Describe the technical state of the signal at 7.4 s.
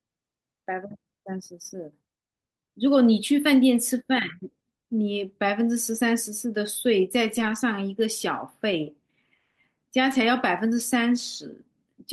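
At 7.4 s the signal is inside a lost packet rebuilt from error correction, spanning about 7.27 to 7.57 s. Several packets failed to arrive, and the decoder filled the hole with the low-bitrate backup copies carried in the packets that followed. About 160 ms of speech was reconstructed this way, which fits a run of several 20 ms packets. The speech never drops out, but across that stretch it turns rougher and noisier.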